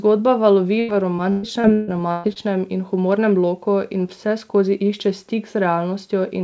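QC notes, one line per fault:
0.80–2.38 s, repeated packet loss (robotic sound): seven gaps up to 149 ms, patched by extending prior sound, leave choppy, robotic speech until "in humornem loku".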